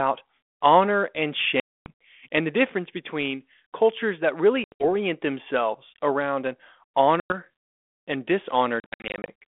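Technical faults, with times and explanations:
1.60–1.87 s (after "honor and"), 4.64–4.84 s, 7.20–7.34 s and 8.80–9.30 s: packet loss on an ADPCM call. Runs of packets were lost and replaced by silence, leaving hard-edged holes. The decoder's adaptive predictor and step size then fall out of step with the sender's, so the sound resumes with brief distortion.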